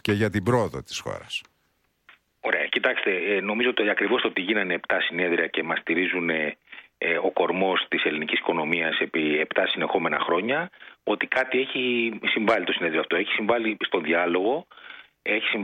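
Nothing here needs flagging; the audio runs along without any technical trouble worth pointing out.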